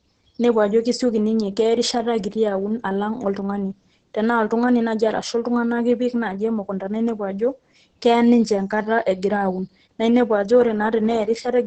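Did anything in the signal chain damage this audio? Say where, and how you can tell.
Yes, at the codec stage, for the whole clip. The speech sounds muffled, hoarse and slightly robotic, and nothing is present above about 8.7 kHz. That fits Opus voice compression running its SILK linear-prediction coder in wideband mode at a very low rate, likely around 10 kbps. At that rate the coder keeps the band near 8 kHz and quantises the excitation so coarsely that the breathy, buzzy texture you hear replaces natural voicing.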